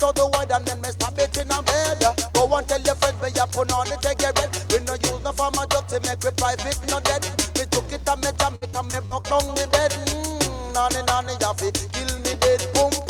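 From 8.55 to 9.25 s the audio shows repeated packet loss, giving a robotic sound. Five gaps fall within this 0.69 s stretch, the longest about 61 ms. Each hole is patched by extending the last received sound. About 215 ms, roughly 31% of the span, is concealed this way, so the passage turns choppy, with pieces missing and repeated fragments in their place.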